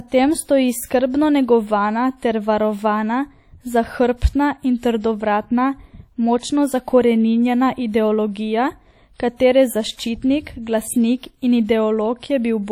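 From start to finish the speech carries a ringing, washy quality, with a hiss that rises and falls along with the signal, and the codec damage is plainly audible throughout. This points to WMA compression as the likely cause, at a rate that fits a setting around 48 kbps. A transform codec at that rate spreads its quantisation noise over long blocks, so the noise smears across tens of milliseconds, and weak spectral lines are dropped entirely.

From 4.78 s a brief burst of hiss lasting until 4.83 s, about 54 ms, comes before a sharp onset, so the attack sounds softened and smeared rather than crisp. This is pre-echo. The attack landed late within a transform block, and the codec spread its quantisation noise evenly across that whole block. Noise scaled for the loud attack therefore also filled the quiet stretch just before it.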